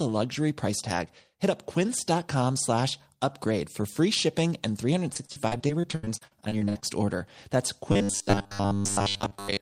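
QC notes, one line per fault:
5.13–6.84 s, repeated packet loss (robotic sound): a rapid series of dropouts, the longest 79 ms, each patched by stretching the preceding sound, so about a third of the stretch is filler and the result is choppy. Spectrogram shows smeared, repeated frames between brief breaks.
7.92–9.61 s, robotic sound from repeated short buffers: a rigid 100 Hz buzz over most of the span, likely from a 10 ms chunk being replayed while fresh audio is skipped. Spectrogram shows a 100 Hz comb of harmonic lines; the waveform shows near-identical 10 ms cycles.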